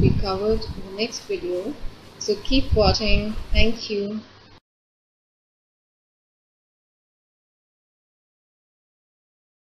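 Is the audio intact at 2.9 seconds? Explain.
No. Compressed frames are skipped at 2.94 to 2.96 s. Missing or rejected frames make the audio jump ahead about 70 ms, leaving a blip or click at the join.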